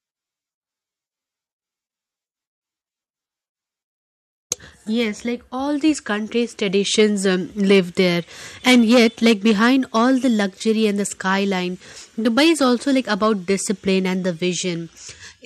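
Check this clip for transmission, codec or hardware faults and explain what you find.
No faults of any kind can be heard here.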